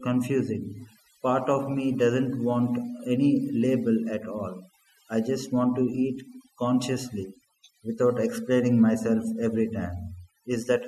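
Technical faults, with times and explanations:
Throughout, overdone noise removal: the background drops and breaks up into twinkling specks. A noise reducer set too strong is pulling individual frequency bands down or off whenever they sit near its noise estimate, taking quieter speech detail with them.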